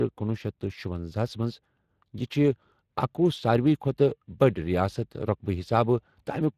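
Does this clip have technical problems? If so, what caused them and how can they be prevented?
Yes. The speech was passed through the Speex codec for its whole length, at a setting that points to a bitrate of around 22 kbps. Speex is a CELP speech codec that models the voice and spends a limited budget on the excitation signal, so at this setting the damage is plainly audible. The voice takes on a noisy, hoarse grain, and nothing is present above 15.2 kHz. To prevent this, record or transmit with a higher-quality modern codec such as Opus, or keep a lossless copy.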